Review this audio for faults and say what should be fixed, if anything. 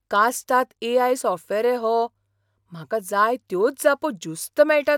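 Nothing here needs fixing.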